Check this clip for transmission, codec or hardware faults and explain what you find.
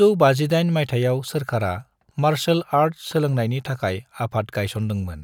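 Checking this clip turns up no faults to explain.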